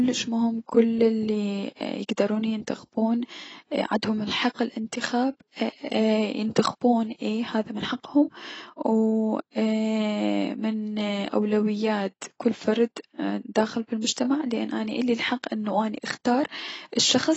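Throughout, the speech is dull and smeared, with nothing above 8 kHz. Sibilants fizz. Likely AAC compression, at a low bitrate near 24 kbps.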